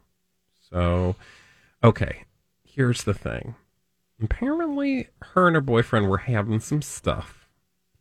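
No audible technical faults occur anywhere in this speech.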